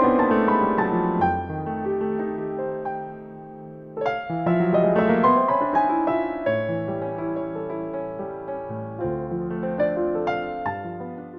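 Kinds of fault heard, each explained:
No kinds of fault are heard, so there is nothing to explain.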